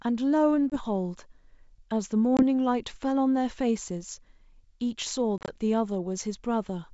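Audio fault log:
0.70–0.77 s, packet loss on an ADPCM call: about 20 ms of audio drops to silence, then returns slightly distorted as the decoder's predictor and step size resynchronise.
2.37–2.43 s, packet loss on an ADPCM call: another hard-edged 20 ms hole, likely a couple of packets; the mismatched step size leaves brief distortion.
5.38–5.50 s, packet loss on an ADPCM call: 70 ms lost in gaps scattered over 100 ms, longest 30 ms; repeated resynchronisation makes this stretch choppy and distorted.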